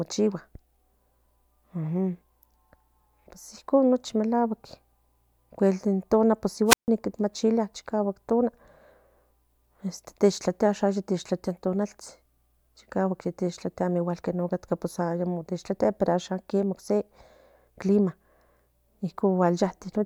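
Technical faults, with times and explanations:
6.66 to 6.89 s, wireless microphone squelch dropout: the radio link fades, hiss rises, then the receiver's squelch mutes the speech for about 149 ms before recovering.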